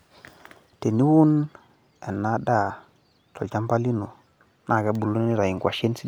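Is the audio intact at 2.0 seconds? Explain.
Yes, at 2.0 seconds the speech plays through intact, with no dropout, click, distortion or other fault to be heard at that moment.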